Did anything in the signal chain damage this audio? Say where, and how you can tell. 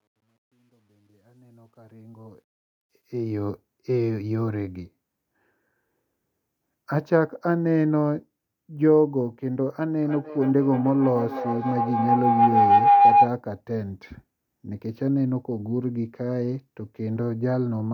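Yes. From 0 to 3.50 s the fade-in shows truncation distortion, gritty up to 1.92 s. That's a sample-format or gain stage keeping about 11 bits with no dither.

From 10.03 to 13.39 s there's feedback howl in the call path, a tone around 700 Hz with a loop delay of about 300 ms, peaking about 7 dB over the speech. Two devices are looping mic to speaker.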